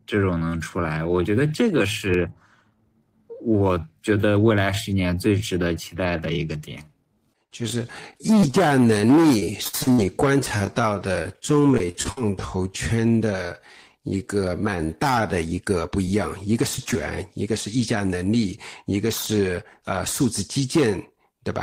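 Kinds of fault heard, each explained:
Time-stretched section: the first 15.34 s runs at about 0.68 times normal speed with pitch held, likely from software repeating short pieces to lengthen it. A spectrogram shows harmonics and syllable patterns drawn out horizontally, with blurred onsets.
Repeated packet loss (robotic sound): from 8.40 to 12.18 s, fifteen gaps, the longest 57 ms, were patched by continuing the last sound, which gives choppy audio. The waveform shows repeated copied stretches, and the spectrogram shows frozen harmonic bands breaking the natural contours.
Short concealed packet loss: brief holes of about 10 ms at 15.56, 15.87, 16.05, 16.77 and 16.91 s, and about 30 ms at 16.85 s, were filled from the preceding sound. Each is a tiny smear or wobble, seen as short frozen or noisy slivers in the spectrogram.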